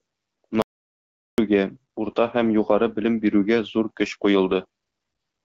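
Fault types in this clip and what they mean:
Audio dropout to silence: the speech cuts off abruptly at 0.62 s and returns mid-flow at 1.38 s, leaving a 0.76 s gap of silence with no room tone or background hiss. The input was likely lost briefly while the recorder kept writing silence. Unlike a noise gate or a natural pause, the gap has no fade and no residual floor, and whatever was said during it is gone. The light AMR-WB coloration on either side is unaffected.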